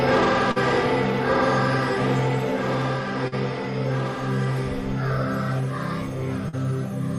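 At 0.51–0.59 s, 3.28–3.35 s and 6.49–6.56 s, short concealed packet loss: about 40 ms went missing each time and was filled by extending the preceding sound, heard as a brief smear. Spectrograms show smoothed, repeated texture; waveforms show a crossfade seam.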